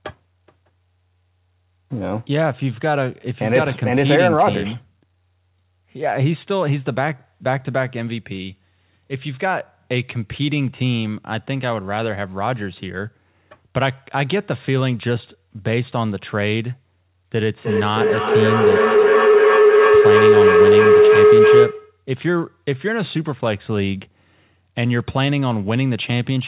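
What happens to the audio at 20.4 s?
You're right in the middle of a feedback howl (17.41 to 22.04 s). The loop between two devices in the same room keeps gaining, so a tone around 400 Hz builds up, with the loop repeating roughly every third of a second, and peaks about 9 dB above the speech.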